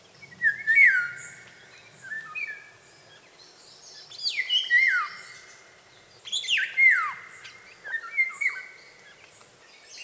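No technical faults can be heard: the signal shows only the ordinary shaping of call microphone processing, with the lowest bass trimmed by its high-pass filter and nothing present above 8 kHz.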